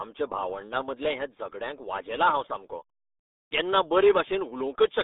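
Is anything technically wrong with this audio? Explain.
Yes. Throughout, the speech carries RealAudio 14.4 codec damage. Nothing above about 3.8 kHz survives, leaving a narrow 250 Hz to 3.7 kHz band, and the heavy, muffled, gargly coding fits RealAudio 1's 8 kbit/s dial-up compression discarding most of the signal's detail.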